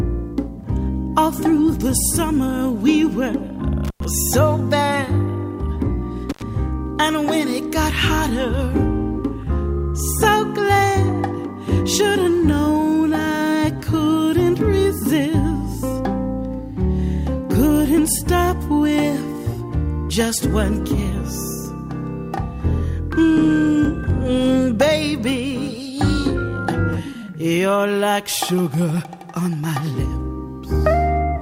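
Twice the sound drops out with a crackle at each edge, from 3.85 to 4.05 s with about 100 ms of silence and from 6.30 to 6.43 s with about 84 ms. This is intermittent contact: a loose cable or plug briefly opens the signal path.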